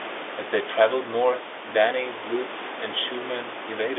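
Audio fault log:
No faults heard.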